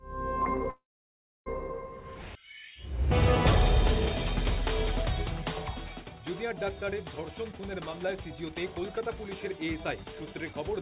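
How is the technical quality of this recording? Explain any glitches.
The quality takes a couple of noticeable hits: a stall near the start and two hurried stretches toward the end, all riding on a narrowband call sound with nothing above 4 kHz, which fits G.711 mu-law telephone coding.

From 0.70 to 1.48 s there's a call audio freeze. The sound stalls for about 760 ms, first as a short fading buzz carrying on the last bit of sound, then roughly 630 ms of silence, before picking up exactly where it left off. The likely cause is packets held up in transit, so the jitter buffer ran dry and the receiver filled the wait rather than dropping anything.

Two jitter buffer speed-ups follow. From 7.41 to 9.10 s the audio runs about 9% fast, and from 9.51 to 10.54 s about 5% fast, with pitch unchanged. The buffer had too much queued, so it trimmed tiny pitch-period slices over and over, around 150 ms and then around 70 ms in total, which makes those stretches sound rushed.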